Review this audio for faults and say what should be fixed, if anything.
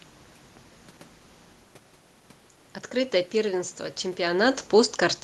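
Automatic gain falling runs from 4.26 s to the end at 5.23 s. The gain control judged the input too loud, or its background noise too strong, and lowered its gain gradually, so the speech sinks and the room noise beneath it drops with it. On a waveform the envelope tapers steadily through that final second. On a spectrogram every band, background included, fades together. To prevent it, set the input level lower before the automatic gain stage so it never needs to pull back.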